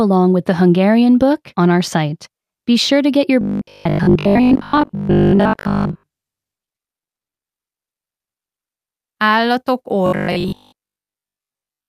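From 3.41 to 6.07 s the speech takes on robotic sound from repeated short buffers. Most of the audio in this stretch is a fixed 50 Hz buzz that follows the speech only roughly. The likely cause is audio arriving too slowly, so the playback side kept replaying its last chunk, about 20 ms long, in place of the new material, which was skipped. The 50 Hz rate of that repetition sets the metallic tone.

From 6.65 to 7.07 s there is repeated packet loss (robotic sound). Several short holes, none longer than 20 ms, follow one another closely, and each is patched by extending the sound just before it. About 80 ms of real audio is missing and roughly a fifth of this span is concealment. The result is choppy, mechanical speech with small pieces gone.

At 7.07 s this turns into a long network dropout lasting until 7.45 s. For about 360 ms nothing is heard at all, and when the speech returns, that section is simply missing rather than delayed. 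The likely cause is that the receiver got no audio for the whole stretch and had nothing to play.

From 10.06 s to the end of the clip the same robotic sound from repeated short buffers returns, with the same 50 Hz metallic buzz replacing most of the speech, likely since the last 20 ms of audio is replayed over and over while new audio is dropped.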